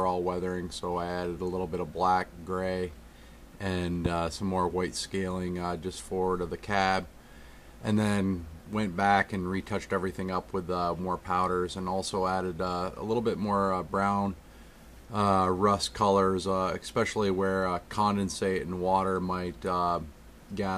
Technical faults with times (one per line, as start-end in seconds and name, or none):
4.06-4.08 loud pop